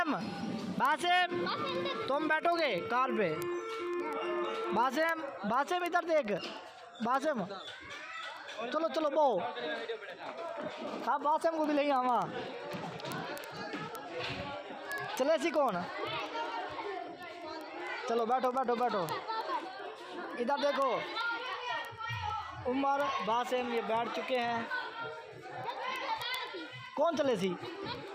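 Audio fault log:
0.15–28.14 s word clock ticks: sharp, uneven ticks about every 70 ms as unlocked clocks a few hundred ppm apart slip one sample; regularly spaced thin vertical broadband lines on a spectrogram.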